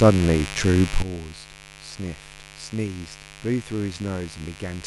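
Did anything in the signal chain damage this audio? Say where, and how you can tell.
Yes. Switching spikes from the 50 Hz mains, likely through a dimmer, rectifier or unshielded run, got into the analogue wiring, causing mains buzz for the whole clip. Its harmonics stack up into a raspy, constant buzz sitting roughly 15 dB below the speech.

At 1.02 s the digital gain falls by about 12 dB in a single step and stays down to the end. The speech and the background noise drop together, which points to a sudden gain jump in processing, most likely a gain setting applied with no ramp.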